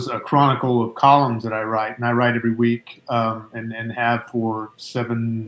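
No technical faults can be heard anywhere in the recording; the signal stays continuous and steady throughout.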